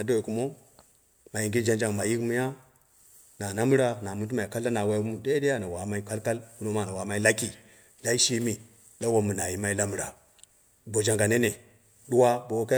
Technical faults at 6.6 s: none

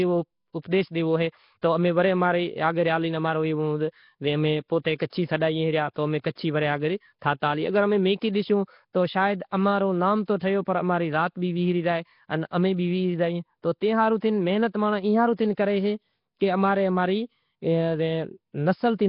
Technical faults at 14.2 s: Nellymoser compression; pre-echo

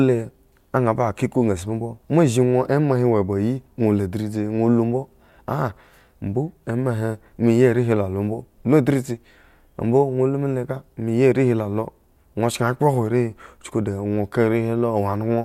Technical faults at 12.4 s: none

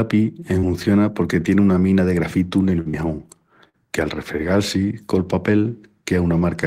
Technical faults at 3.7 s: short concealed packet loss

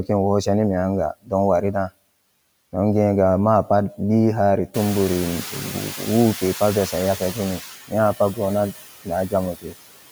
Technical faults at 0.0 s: noise suppressor artifacts

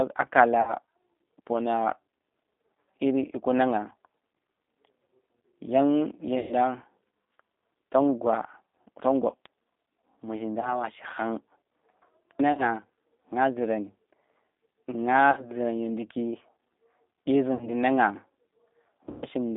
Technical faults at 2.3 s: G.729 codec

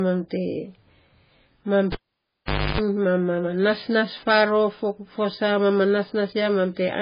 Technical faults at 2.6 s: transcoding between lossy codecs; cable pulled and plugged in

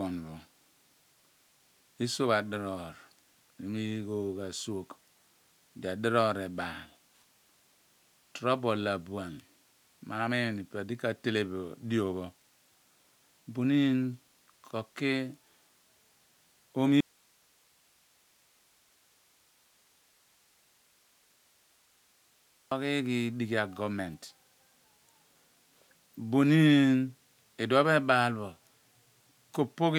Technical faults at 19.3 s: audio dropout to a faint residue

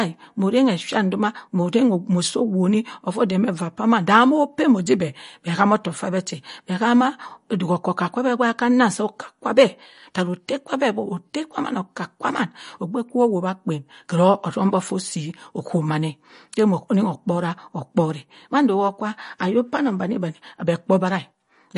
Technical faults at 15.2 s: MP3 compression

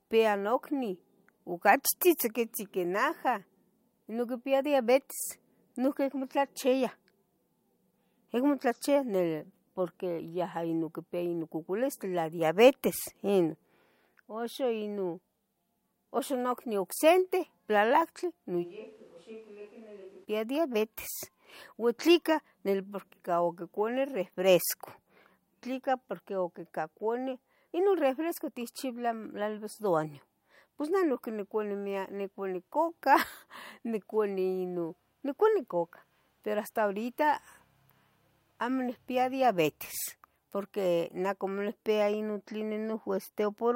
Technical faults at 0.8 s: none

